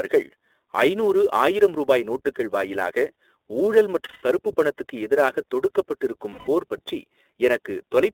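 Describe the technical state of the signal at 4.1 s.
At 4.1 s the sound is a held, slightly buzzy and breathy tone instead of normal speech. This is lost iLBC frames, spanning 4.04 to 4.24 s, about 180 ms, which fits six 30 ms frames. With no packets arriving, the decoder kept repeating the last pitch cycle it had, mixed with noise and fading as the gap went on. Because each iLBC frame decodes on its own, the voice comes back right after 4.24 s.

Under that gap, and throughout the clip, the audio is narrow and a little rough and synthetic, with nothing above about 3.7 kHz and little below 300 Hz. This is the iLBC codec, and the damage is plainly audible. The frame length and the kind of coarseness fit its 30 ms, 13.33 kbps mode. Each frame's excitation is coded separately at a low rate, which gives the buzzy, artificial texture.

There is also a hiss or grain that follows the level of the sound, rising on loud, bright passages and disappearing in pauses. 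This is sample clock jitter. The converter's clock wanders by a few microseconds, so samples are taken slightly early or late. The error is largest where the waveform changes fastest, and here it sits roughly 30 dB below the signal.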